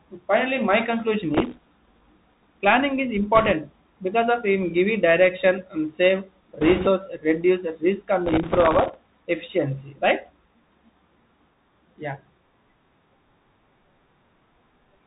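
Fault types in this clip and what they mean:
Bluetooth CVSD headset codec: Present throughout, this narrowband coding cuts everything above 4 kHz. S sounds turn scratchy, loud bright sounds distort as the adaptive step falls behind, and a granular hiss sits under the speech. The hiss and grit set it apart from plain low-pass filtering.
Processor overload crackle: Bursts from 1.34 to 2.58 s and 8.26 to 9.22 s, where the processor repeatedly failed to fill buffers of roughly a millisecond and a half and replayed stale audio. Hundreds of tiny hard-edged repeats give a gritty tearing that stops when the load passes.
Bit errors on a Bluetooth voice link: Short patches at 3.35 to 3.53 s, 6.61 to 6.88 s, and 8.44 to 8.58 s, the last inside the second crackle burst. Flipped bits add a rushing crackle without loud clicks, roughest at 6.61 s, where the error rate is about 5 percent.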